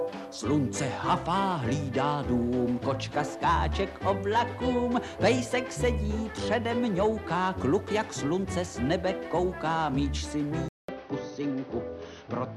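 At 10.68 s a 200 ms gap precedes duller audio, band-limited to 6.2 kHz at unchanged level with new low background noise, likely from the input switching to a poorer device.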